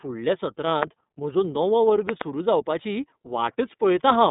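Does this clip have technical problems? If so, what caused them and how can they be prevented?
Yes. The whole recording shows plainly audible iLBC codec damage. The speech sits in a narrow line band of roughly 150 Hz to 3.7 kHz, and nothing reaches above 3.8 kHz. The rough, slightly synthetic texture comes from coding the excitation of each block independently, consistent with 30 ms frames at 13.33 kbps. On a spectrogram the energy stops at a hard ceiling near 3.8 kHz, with an empty band above it. To prevent this, record or transmit with a wideband codec instead of iLBC.

There are also two loud pop events. The first is a single pop from 0.83 to 0.85 s, just before "म्हजो नवो वर्ग". The second is a pair of pops between 2.09 and 2.23 s, just after that phrase. Each peaks around 20 dB above the speech, and the speech continues underneath. The likely cause is a sudden voltage step or pulse, such as a plug, a switch, static discharge or a driver glitch, which the following circuits shape into a sharp transient. 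On a waveform these show as tall, narrow spikes far above the speech envelope. On a spectrogram they appear as thin vertical lines spanning the full band. To prevent them, secure the connections, avoid switching equipment while recording, and ground the setup against static.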